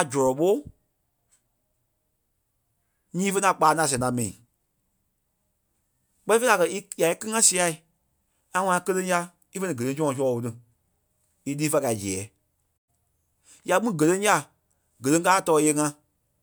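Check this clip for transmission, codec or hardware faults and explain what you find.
One transmission fault is present in the speech: a digital broadcast dropout. From 12.76 to 12.90 s the audio fades out over about 20 ms and falls silent. The receiver stopped getting frames it could decode and muted its output until valid ones arrived. The gap runs roughly 96 ms, which fits about three lost frames. The speech lost in that window is gone, not smeared or repeated. The programme resumes afterwards.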